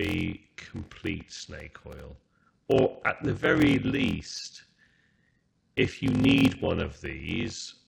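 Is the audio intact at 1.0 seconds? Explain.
No. At 1.0 s, as throughout the clip, a block size mismatch (padded) is active. One stage delivers shorter blocks than the next reads, so each read block is topped up with zeros. The buzz fits 1024-sample blocks, about 14% of each being silence. The speech carries a steady 43.1 Hz buzz at the block rate and plays at 0.861 times normal speed, stretched out but at roughly its usual pitch.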